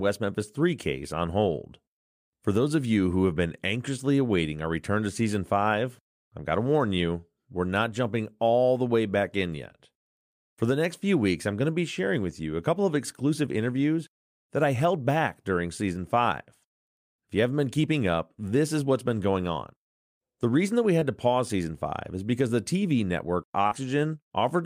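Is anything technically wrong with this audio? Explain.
Yes. Short concealed packet loss occurs at 20.99 to 21.03 s, between "reason that we" and "to pause season", and again at 23.67 to 23.73 s. About 20 ms and then 40 ms of the stream arrived too late to decode. The receiver bridged each gap by extending the preceding sound and then blended back, which leaves a brief smear or wobble in the speech.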